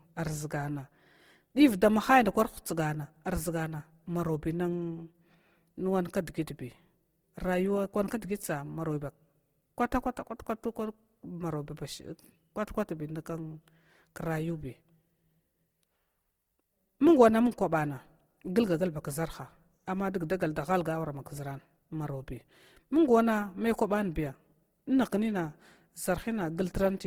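Throughout the whole recording, the speech has been squeezed through low-bitrate Opus compression, most likely in the codec's music (CELT) mode at a rate that fits around 16 kbps. With too few bits for every band, the encoder fills the gaps by copying lower bands upward or substituting noise, so the spectrum still reaches about 20.2 kHz but its detail is invented. The result is plainly audible: a rough, grainy texture over the voice, with tonal parts turning noisy.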